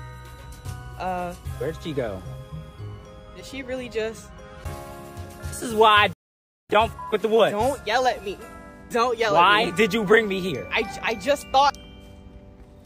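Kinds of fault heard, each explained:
Rebuffering stall: the player ran dry of downloaded audio around 6.13 s, fell silent for roughly 0.57 s, then picked up exactly where it stopped, nothing skipped.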